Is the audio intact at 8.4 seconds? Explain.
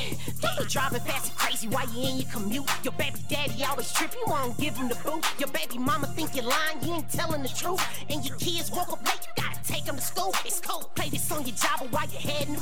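No, a DC offset runs through the whole clip, including 8.4 s: the waveform sits shifted off zero by about -28 dBFS, eating headroom, inaudible except as steady energy at the very bottom.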